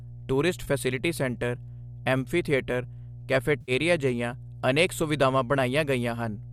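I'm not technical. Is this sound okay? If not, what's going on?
No. Two problems can be heard.

Throughout the clip there is mains hum: a steady low buzz at 60 Hz, the frequency of the electricity supply. It comes from power leaking into the audio path, through a ground loop between connected devices or a transformer sitting too close to the cables. Here it is fairly loud, clearly noticeable under the speech rather than faint.

There are also two short dropouts, each an AAC frame loss with concealment. Some of the compressed data was lost on the way, likely from a low-delay AAC stream of the kind video calls use, and the decoder guessed at the missing bits by reusing what it had just heard. At 0.64 s a 20 ms gap causes a brief smeared, noisy blip. At 3.61 to 3.72 s a longer 70 ms gap gives a washy, phasey patch.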